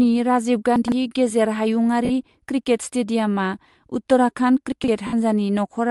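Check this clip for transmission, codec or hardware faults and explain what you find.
Three kinds of fault are present in this speech. Bluetooth LC3 compression is likely present throughout. The transform codec zeroes upper bins and noise-fills them, so the sound is grainy and breathy, with a speckled, smeared upper spectrogram.

Chunks out of order occur at 0.76 to 0.92 s and 4.72 to 4.88 s. A 40 ms chunk plays three chunks late, giving a jumbled moment. The waveform shows three abrupt joins.

Lost LE Audio frames occur at 2.05 to 2.10 s (50 ms) and 5.07 to 5.13 s (60 ms). The decoder repeats the last spectrum with random signs, producing a noisy, fading smear that appears as a blurred patch on the spectrogram.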